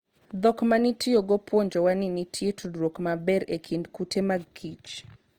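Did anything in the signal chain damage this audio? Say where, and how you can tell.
Yes, at the codec stage, and it runs the whole clip. The speech has a grainy, rough texture, with the upper bands sounding filled in with noise rather than carrying real detail, yet the bandwidth stays wide, reaching about 20.2 kHz. That mix points to Opus compression, likely in its music (CELT) mode: it preserves each band's energy but, short of bits, stuffs bands with folded or noise content, which fits a rate near 24 kbps.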